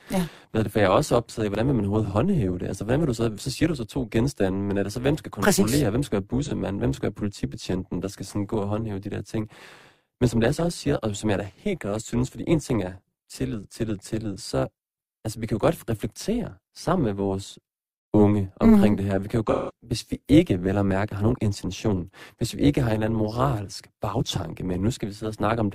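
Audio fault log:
throughout: overlap-add ripple. A rough, buzzy tremolo runs under all the speech, the level swinging by about 11 dB at around 200 Hz. Windowed frames were rejoined with an overlap that doesn't sum to constant gain, so loudness dips and recovers once per frame.
6.45–6.51 s: AAC frame loss with concealment. Just after "hvem skal være" comes a brief smeared, phasey blur lasting about 64 ms. The loss fits a single frame, and the decoder patched the gap from the last good spectrum before resuming with "hvem skal være politibetjenten".
19.51–19.71 s: AAC frame loss with concealment. After "kan jo" the sound turns noisy and smeared, then sags toward silence for about 0.2 s before fading back in at "hvis vi ikke vel". That fits roughly four frames being lost, with the concealment decaying as the gap went on.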